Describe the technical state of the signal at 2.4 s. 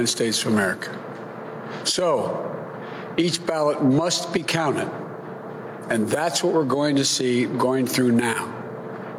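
Gain pumping is present at 2.4 s, as it is across the whole clip. The gain swings by about 10 dB. Likely cause: input gain set far too high, with a fast limiter repeatedly pulling the level down and squashing the dynamics.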